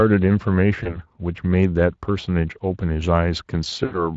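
Across the whole clip the speech sounds grainy and hoarse, with a noisy edge. This is the Speex codec: its CELP coder has too few bits to model the excitation, and the plainly audible damage fits a bitrate around 20 kbps.

From 0.83 to 0.98 s, and again from 3.85 to 4.05 s, the speech smears into a buzzy tone or coloured noise that fades before recovering. This is VoIP packet loss concealed by the speech codec. The decoder extrapolated from its last pitch and filter, then carried the error forward frame by frame. The gaps point to about 20 ms and 60 ms of missing audio.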